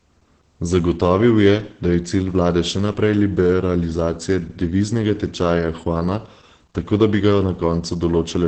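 Throughout the speech, heavy Opus voice compression is audible. Nothing is heard above about 8 kHz, consistent with wideband SILK coding, and the coarsely coded excitation leaves the speech muffled, hoarse and slightly robotic, which fits a bitrate of around 10 kbps.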